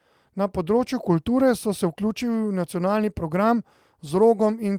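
Nothing technically wrong turns up in this short speech clip, so there's no fault to flag here.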